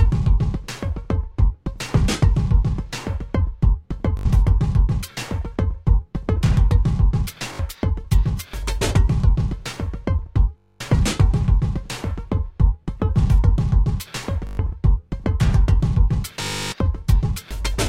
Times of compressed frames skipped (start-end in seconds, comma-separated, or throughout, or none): none